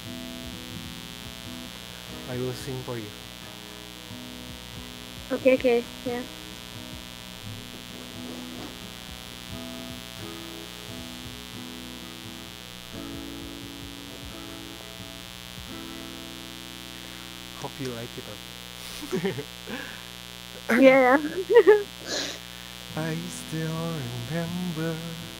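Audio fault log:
throughout, mains buzz: a steady, raspy buzz sits under the whole clip, and it's loud, only about 10 dB below the sound itself. It's built on 60 Hz mains, so you get a dense stack of harmonics of 60 Hz climbing well into the kilohertz range. That grainy edge comes from sharp switching spikes, the kind a dimmer, a rectifier or a missing shield lets in twice every mains cycle, rather than a clean hum.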